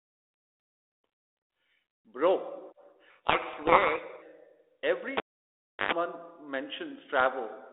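Codec payload misread, from 3.1 to 4.25 s: the speech suddenly sinks under harsh, grinding distortion. The two ends of the link disagree on the bit order of the G.726 code words, so the decoder accepts each frame as valid but assembles every ADPCM difference value from bits in the wrong positions. Its predictor is then steered by nonsense, and the output turns to rasp for just over a second until both sides agree on the packing again.

Cable pulled and plugged in, from 5.17 to 5.92 s: a sharp pop cuts the sound, leaving near silence for about 0.7 s while the live lead is out of its socket. As the plug goes back in, its tip touches first and picks up a burst of 50 Hz mains buzz lasting roughly 108 ms, before a second pop brings the signal back. The return still carries the narrow telephone band of the link, about 300 Hz to 3.6 kHz, which fits G.726 at 32 kbit/s.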